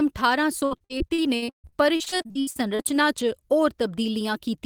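Speech, with repeated packet loss (robotic sound) from 0.59 to 2.87 s. Around two dozen short dropouts hit this stretch, the longest about 140 ms. Each hole is filled by stretching the preceding sound. Roughly 40 percent of the span is concealed, so the speech turns choppy with pieces missing.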